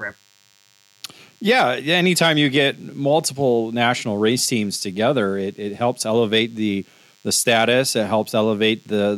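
DECT cordless phone buzz runs throughout this speech recording: a thin, steady 100 Hz buzz, roughly 40 dB down, from a nearby handset's radio bursts rectified in the audio circuitry.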